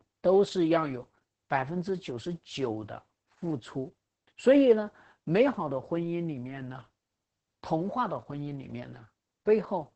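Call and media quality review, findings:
Opus voice compression, whole clip: speech muffled, hoarse, faintly robotic. SILK linear-prediction coding at a starved rate, consistent with roughly 10 kbps, with coarsely coded excitation. Spectrogram: hard ceiling at 8 kHz, smeared harmonics, noisy fill between formants.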